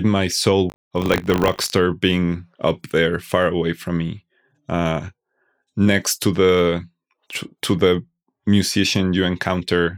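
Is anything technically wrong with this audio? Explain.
Yes. From 0.68 to 1.76 s, between "my soul" and "being up there far", there is buffer tearing: the writer and hardware reader cross inside each period, so a small sliver of audio about 40 ms stale is spliced in. This makes a 50 Hz robotic rattle that, unlike mains hum, vanishes in silence.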